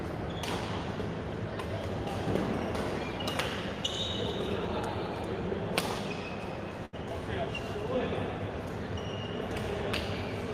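At 6.85 to 6.95 s, a burst of packet loss: about 80 ms goes missing, bridged by a fading continuation of the previous sound rather than abrupt silence.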